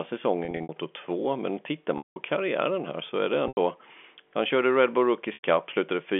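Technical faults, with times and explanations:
0.45–0.69 s, 1.98–2.16 s (just before "karriären här så är"), 3.48–3.57 s (after "här så är det") and 5.34–5.43 s, packet loss with pitch repetition: gaps of 90–180 ms are filled by looping the last pitch period, giving a held, buzzy tone that fades before the speech returns through the telephone-band G.711 path.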